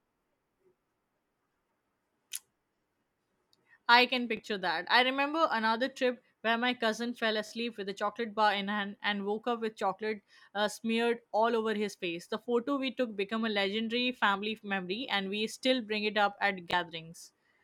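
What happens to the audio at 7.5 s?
A Bluetooth stutter hits the speech from 7.47 to 7.51 s. Audio data failed to reach the receiver in time, so it replayed the last slice it held until fresh data arrived; the 40.6 ms gap points to two lost packets. You hear a brief buzzy repetition, a tiny machine-gun flutter, and then the speech picks up further along, as though it had kept playing, so that fraction of a second is missing.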